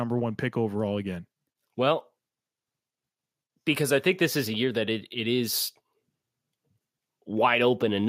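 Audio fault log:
No faults found in this speech recording.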